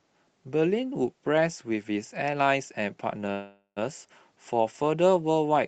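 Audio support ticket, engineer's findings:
Call audio freeze, 3.31–3.79 s: sound stalls and is carried on as a fading buzz, about 90 ms of silence at the end, then resumes where it left off. Nothing lost, just roughly half a second of delay added. Likely packets held up, jitter buffer ran dry. Call path band-limited, top end cut around 8 kHz, fits Opus at a modest bitrate.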